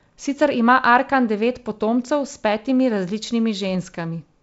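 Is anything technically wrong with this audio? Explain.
No, nothing is technically wrong with this audio.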